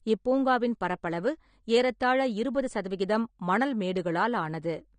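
Likely low-bitrate AAC compression throughout, around 32 kbps, strips everything above 9.7 kHz and starves the spectrum, leaving the speech dull, smeared and fizzy on sibilants.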